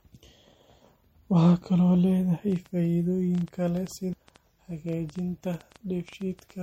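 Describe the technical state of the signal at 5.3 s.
A train of clicks runs from 2.52 to 6.51 s, about 6.2 per second at an uneven pace, roughly as loud as the speech. The cause is likely electrical interference or a struggling interface.

MP3 compression is plainly audible throughout, with dulled treble and watery, swirling detail. This fits a likely low bitrate near 64 kbps, where the encoder discards weak frequency content.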